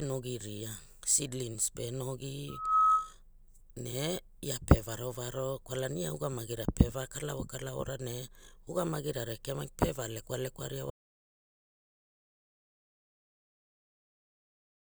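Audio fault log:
2.48 to 3.13 s, loudspeaker feedback squeal: the microphone picked up its own loudspeaker and the loop gain passed unity at 1.3 kHz, so that tone fed on itself, swelling over roughly a third of a second to stand about 10 dB above the speech.
10.90 s to the end, audio dropout to silence: the input likely disconnected or was muted while recording carried on writing silence, so the speech cuts off mid-flow and the last four seconds or so are dead silence with no room tone.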